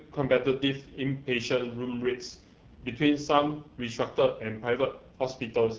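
The speech sounds rough and raspy from start to finish, with a hissy top band. This is heavy AMR wideband (HD Voice) codec damage, and the coarse roughness fits its lowest 6.6 kbit/s mode, where the vocal-tract model is starved of detail.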